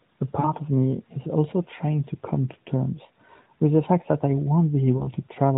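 Lost AMR speech frames occur at 0.40 to 0.49 s, 3.44 to 3.48 s and 4.98 to 5.09 s. Frames failed their check, so the decoder repeated the last good settings at falling gain. Each single-frame gap gives a short dip or warble. The first gap is about 40 ms, which fits two frames.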